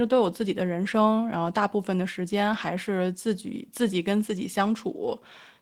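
Speech recording, with no technical fault audible anywhere in it. No moment stands out as needing attention or repair.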